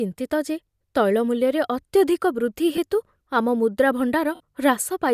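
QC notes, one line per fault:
2.76–2.78 s and 4.35–4.40 s, lost LE Audio frames: Bluetooth LE Audio frames dropped, and the LC3 decoder repeated its last spectrum with scrambled signs, so each gap (about 15 ms, then 52.5 ms, consistent with 7.5 ms frames) becomes a brief noisy smear rather than a click.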